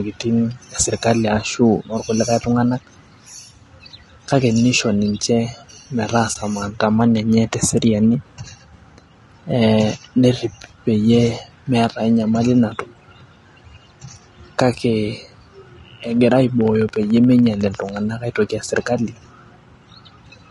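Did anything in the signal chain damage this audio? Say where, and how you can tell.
Yes. Throughout the speech, the codec stage has left the voice rough and grainy, with noise filling the gaps between harmonics and a thin, synthetic-sounding top band. This plainly audible damage is likely low-delay AAC compression (AAC-ELD), consistent with a bitrate around 32 kbps.

At 6.33 to 6.36 s there is a brief, soft-edged dropout of about 20 ms, which fits one lost frame. This is AAC frame loss with muting: the decoder zeroed the missing spectrum, and the overlapping windows faded the sound out and back in.

From 16.61 to 17.97 s a train of clicks runs at a regular 14 per second, about twenty pulses of similar shape and roughly as loud as the speech. They point to an analogue or interface stage, likely interference or a faulty connection or power supply injecting pulses.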